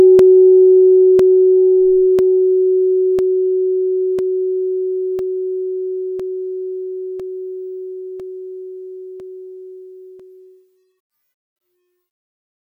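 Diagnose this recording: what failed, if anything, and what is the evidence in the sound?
Periodic USB or driver dropouts, 0.19 to 12.2 s: ticks every 1.0 s, as a stalled driver or buffer stage leaves roughly 2 ms gaps of silence.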